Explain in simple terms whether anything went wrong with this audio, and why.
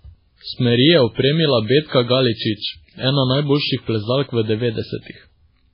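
MP3 compression damage runs through the whole speech clip, likely from squeezing it into a very small file. Everything above about 5.3 kHz is missing, so it sounds dull, and faint detail flickers in and out, giving a watery, swirly quality with metallic chirps on s sounds.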